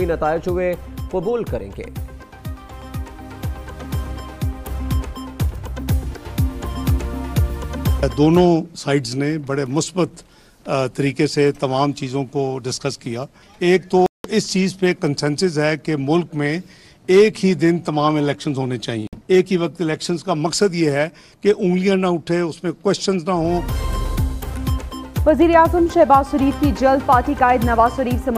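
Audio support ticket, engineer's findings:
Sound drops to silence at 14.06–14.27 s (181 ms gap) and 19.07–19.19 s (55 ms gap), then resumes. Likely Bluetooth stall: delayed packets drained the headphone buffer until retransmissions arrived.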